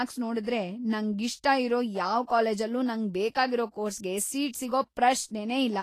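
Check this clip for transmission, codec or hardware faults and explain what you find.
There is one fault, present throughout the speech: plainly audible Vorbis compression. On a spectrogram, energy stops at a flat ceiling near 14.2 kHz. Coarsely quantised treble turns sibilance grainy and hissy, which is likely a low-bitrate encode around 33 kbps.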